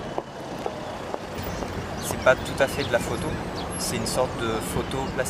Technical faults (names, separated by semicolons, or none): none